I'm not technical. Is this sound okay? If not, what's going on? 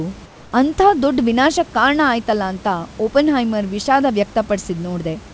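No. From 0.26 to 0.52 s the room background turns into a smooth, slightly quieter hiss rather than silence, likely comfort noise in place of the background.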